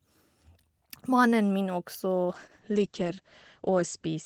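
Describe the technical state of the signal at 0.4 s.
At 0.4 s the speech signal is intact, with no audible fault at that point.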